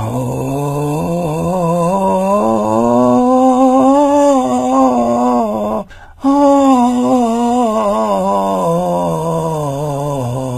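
A music clip with plainly audible HE-AAC compression throughout: the treble sounds bright yet gritty and metallic, with nothing above 14.9 kHz, likely from band replication at a very low bitrate near 20 kbps. Unlike a plain low-pass, the top end is present but synthetic.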